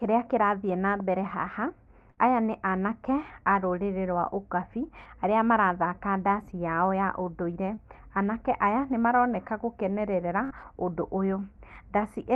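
At 2.11 to 2.19 s, between "kĩrathiĩ na mbere haha" and "aya nĩ anake a", a burst of packet loss removes roughly 60 ms of speech. The receiver keeps extending the last sound for about 54 ms while fading it out. Speech then resumes further along, skipping the section that was lost.

At 7.75 to 7.79 s, after "ndaci yao ya ũndũire" and before "anake aya nĩ maroneka", a short concealed packet loss drops about 20 ms. The decoder covers the gap with roughly 18 ms of sound continued from what came before and blends it back into the real signal. This leaves a brief smear at the join.

At 10.45 to 10.52 s, right after "aya nĩ maroneka gũkenerera", a second burst of packet loss behaves like the first. About 56 ms of fading continuation covers a 60 ms hole, and the speech jumps forward when it resumes. All of this passes through an Opus call path with a 12 kHz bandwidth, which fits a bitrate of about 32 kbps.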